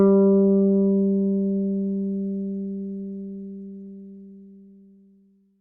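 Repeated stalls (stutter) run from 3.52 s to 5.42 s. Packets kept arriving later or more slowly than playback consumed them, so the jitter buffer emptied 19 times across that stretch. Each time, the receiver extended the last sound for at most 10 ms before resuming, adding about 185 ms in total, roughly a tenth of the span. Nothing is lost, but the sound catches and hiccups in rapid little hitches and runs slightly late.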